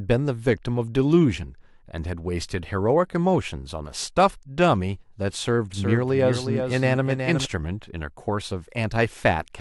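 From 5.74 s to 7.46 s the speech is heard twice: a doubled audio track, with a second full-band copy trailing the original by roughly 400 ms and sitting only about 5 dB lower. The likely cause is the same signal being mixed in again through a slower path. Unlike an echo or reverb tail, the copy has no decay and no room colouring, and it switches on and off abruptly at those two points.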